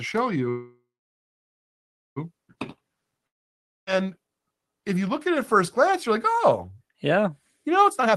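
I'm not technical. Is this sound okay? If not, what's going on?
No, there are three problems.

From 0.49 to 2.18 s the sound stops. The last bit of sound stretches into a fading buzz, then there is about 1.3 s of silence before it carries on exactly where it left off. This is a call audio freeze. Packets of audio were likely held up on the network, so the receiver ran out of sound to play and waited. Nothing is lost, but a pause of about 1.7 s has been added.

From 3.27 to 3.89 s there is another fading buzz and silence. This time, when the sound returns, about 0.6 s of it is simply missing. This is a long network dropout. The audio for that stretch likely never arrived, so it could not be played later and was skipped.

From 7.90 s to the end, the speech suddenly sounds rushed, running at about 164% speed while the pitch stays normal. This is a jitter buffer speed-up. The receiver had built up too much waiting audio. 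To catch up, it cut out many tiny slices, roughly 0.15 s in total.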